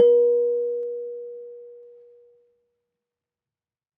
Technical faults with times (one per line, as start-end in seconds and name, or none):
0.83-1.83 channel delay (comb filtering)